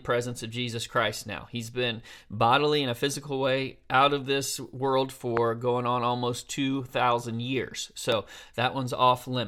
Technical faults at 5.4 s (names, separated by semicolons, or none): loud pop